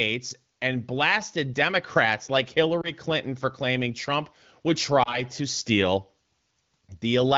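At 2.81–2.92 s and 5.03–5.20 s, just before "to steal", a brief dip or warble rather than a silent gap marks lost AMR speech frames, likely single frames, concealed by the AMR-WB decoder at 12.65 kbit/s.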